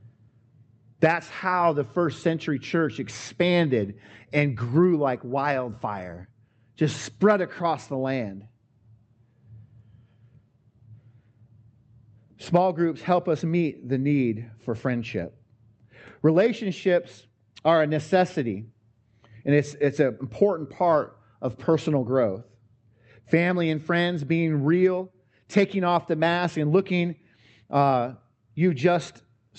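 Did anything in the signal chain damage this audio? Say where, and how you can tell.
No, nothing in this speech clip stood out as damage when I listened to it.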